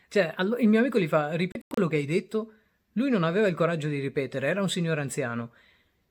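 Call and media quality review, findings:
Digital broadcast dropout, 1.52–1.78 s: speech mutes in several short holes, about 160 ms lost across 256 ms, longest gap 96 ms. Receiver muting on failed or missing frames. Waveform shows flat silent gaps, spectrogram shows blank vertical bands.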